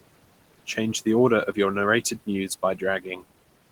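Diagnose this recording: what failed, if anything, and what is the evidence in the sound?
The failure is in call processing, where a noise suppressor leaves artifacts across the whole clip. The room noise, sitting about 18 dB under the speech, is pulled down by about 18 dB in the gaps and swells back under each phrase. A suppressor estimates steady noise per band and attenuates those bands frame by frame. Unlike a noise gate, the residue varies band by band rather than acting as a clean on-off switch.

Speech cut by the noise suppressor also appears between 3.03 and 3.23 s, near the end of the clip. Around a tenth of a second of speech within that span sinks by up to about 10 dB, and soft sounds come out swallowed and faint. The suppressor mistook low-level speech energy for noise and turned it down with the background. A dropout or packet loss would leave silence or a synthetic fill, but here the sound fades unevenly by band, with nothing missing outright.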